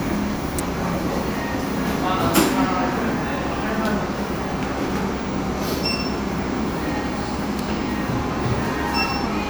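Electrical switching spikes at 0.59 s and 7.59 s cut into this everyday-sound recording as sharp snaps, the first peaking near -5 dBFS, the second near -10 dBFS, likely from a nearby switch arcing into the audio line.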